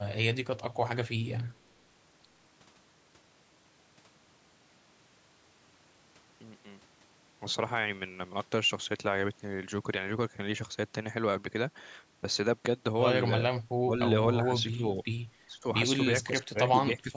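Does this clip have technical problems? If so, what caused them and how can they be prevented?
Yes. The speech dips sharply at 13.85–13.99 s, 14.49–15.07 s, 15.47–15.66 s, 16.25–16.59 s and from 16.76 s to the end, by roughly 10 to 20 dB at the deepest. This is speech suppressed in double talk, likely from an echo canceller that mistook the talker for loudspeaker echo while the far side spoke and pulled both down. On a waveform the envelope collapses into gaps. A spectrogram shows the harmonics thinning or vanishing in short blocks. A headset, or a canceller tuned for full-duplex double-talk, prevents this.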